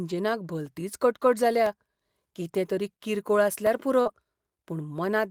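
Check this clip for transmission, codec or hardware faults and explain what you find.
Three faults are audible in this speech clip.

Periodic USB or driver dropouts: from 0.66 to 4.68 s, something blocks the audio path once per second, leaving roughly five tiny gaps of silence, each about half a millisecond long, heard as regular ticks.

Short concealed packet loss: from 4.01 to 4.07 s, 40 ms of audio arrived too late, so the receiver extrapolated the preceding sound, causing a brief smear or wobble.

Lost packet rebuilt from error correction: from 4.05 to 4.11 s, 40 ms was reconstructed from low-bitrate backup copies, which fits two lost packets, so that stretch sounds rougher and noisier without a gap.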